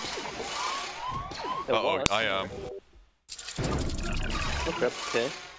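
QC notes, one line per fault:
2.06 s, file header played as audio: a single sharp, loud click cuts in abruptly, standing apart from the surrounding sound, as if a snap were pasted over it. This marks a join where a second WAV piece was attached or streamed without stripping its header, so the few dozen header bytes were read as sample values. Those bytes bear no relation to the waveform, producing a burst of roughly a millisecond that jumps well outside the signal.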